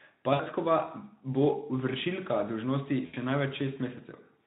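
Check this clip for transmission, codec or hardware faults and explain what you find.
Two short dropouts show VoIP packet loss concealed by the speech codec. The first runs from 0.33 to 0.41 s. About 60 ms of audio is missing, which fits three lost 20 ms frames. The second runs from 3.05 to 3.16 s. About 80 ms is missing, which fits four frames. The decoder fills each gap by repeating its last pitch and filter at falling gain. The speech smears into a brief buzzy tone or coloured noise that fades. It sounds weak for a moment after the packets return. The Speex codec carrying the speech adds light coding damage.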